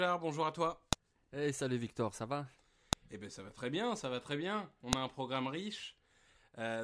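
File header played as audio at 0.93, 2.93 and 4.93 s in this speech recording: a sharp, loud click follows "à toi", then "ça va", then falls between "ça va très bien" and "a un programme". Spaced exactly 2.0 s apart, these clicks mark joins where each piece's header bytes were left in and played as samples.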